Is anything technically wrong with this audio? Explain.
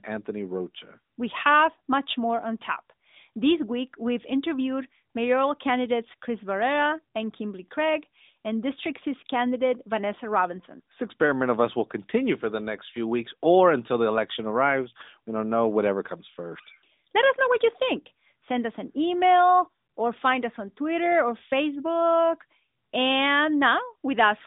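No, nothing here is technically wrong.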